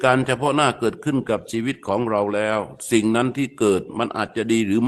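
At 2.53 to 2.55 s, a lost packet rebuilt from error correction: the decoder substituted a low-bitrate Opus copy, so this 20 ms of speech sounds briefly rougher and noisier, without a gap.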